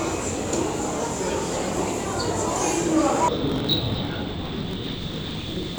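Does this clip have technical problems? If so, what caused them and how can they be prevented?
Yes. From 3.28 s to the end, the sound drops an octave, doubled and choppy, with a flutter near 47 Hz: interleaved audio read as planar. Each block of about 21.33 ms, which fits a 1024-sample block, is alternating left-right samples but was split into halves as if each channel were stored separately. Each half then plays at half speed over the whole block, so the overall pace stays right, unlike a sample-rate mismatch, which would slow everything down. To prevent it, check the buffer layout flag wherever samples are handed between components.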